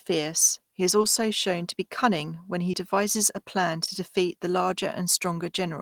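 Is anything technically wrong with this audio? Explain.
Yes. Short concealed packet loss at 1.01 s after "he is", 2.71 s after "be cunning when he" and 3.85 s before "defeat the": about 20 ms of audio missed the decoder, so the receiver extended the preceding sound before blending back, leaving brief smears.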